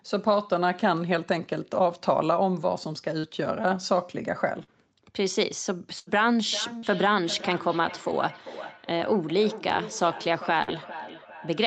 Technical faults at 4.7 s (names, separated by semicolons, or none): short concealed packet loss